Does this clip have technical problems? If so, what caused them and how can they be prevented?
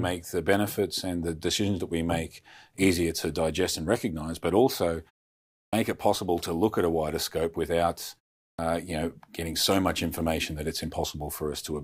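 Yes. Twice, speech jumps in abruptly out of silence with its opening sounds missing. At 5.68–5.73 s, after a 0.66 s pause, about 48 ms is lost before "it possible to look". At 8.53–8.59 s, after "a wider scope without" and a 0.41 s pause, about 56 ms vanishes before "you know getting so". This is a clipped start after a pause: the output device slept through the silence and needed time to wake or re-lock. Keeping the output path active during silence prevents it.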